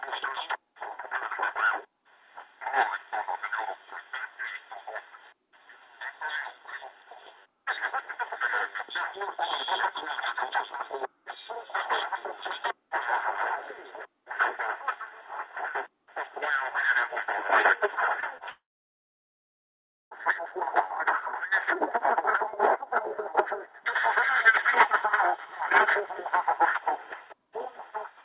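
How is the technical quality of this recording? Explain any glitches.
The recording has a cluster of network glitches at around 18 to 20 seconds, heard through a narrow telephone-band path with nothing above 4 kHz, which fits a G.711 call codec.

Short concealed packet loss occurs twice, at 18.20 to 18.25 s and 18.37 to 18.44 s. Each is a brief smear or wobble lasting a few hundredths of a second. About 30 ms of audio failed to reach the decoder in time each time. The receiver patched the gap by extending the preceding sound before blending back into the real signal.

A long network dropout follows from 18.50 to 20.14 s. The sound briefly continues as a fading buzz or hiss, then goes silent for about 1.5 s before resuming further along. That pattern points to a likely dropout in which about 1.6 s of audio never arrived. The receiver's concealment could only stretch the last sound for a moment, and everything in the gap is simply lost.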